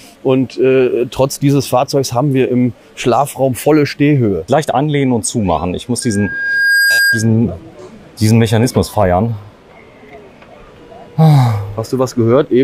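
A loudspeaker feedback squeal runs from 6.02 to 7.30 s: a single 1.6 kHz tone swelling over roughly the first 0.7 s until it matches the surrounding audio. Unlike a steady interference whistle, it grows by itself as the microphone re-amplifies its own loudspeaker.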